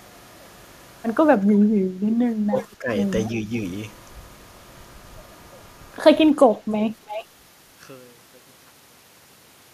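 From 1.46 to 2.90 s the speech drops by as much as about 10 dB in pieces, roughly a second in total. This is speech suppressed in double talk: the likely cause is an echo canceller that could not separate near speech from far-end echo during overlap and attenuated both.

Echo leak appears as delayed copies at 2.58–2.64 s (321 ms delay, about 30 dB below the speech), 6.41–6.45 s (331 ms, about 25 dB down) and 7.06–7.25 s (333 ms, about 15 dB down). Each is likely residual loudspeaker pickup that the far end's canceller failed to remove.

Within the fade-out, which starts around 6 s and ends at 9.73 s, truncation distortion on a fade sets in from 6.19 s. The fade is computed at 10 bits with no dither, so the quiet tail is reduced to coarse steps. From 7.02 to 9.73 s it sounds gritty.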